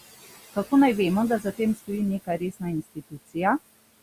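Noise suppressor artifacts run through the whole clip. The suppressor pulls the steady room noise, which sits about 16 dB under the speech, down by about 17 dB between phrases and lets it back up under the voice.

Speech cut by the noise suppressor occurs at 2.25–2.62 s and again at 2.84–3.36 s. Here the suppressor misreads quiet speech as noise and attenuates it, by up to about 20 dB in the first span and about 16 dB in the second. Only brief fragments are hit, on the order of a tenth of a second in the first span and about 0.15 s in the second. Those parts sound swallowed.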